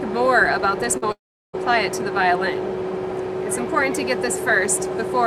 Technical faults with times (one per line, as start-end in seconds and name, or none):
0.97-1.04 short concealed packet loss
1.12-1.55 long network dropout